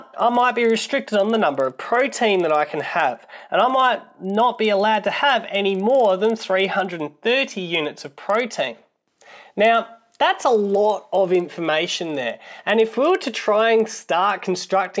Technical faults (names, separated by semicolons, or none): resampler restarted on every block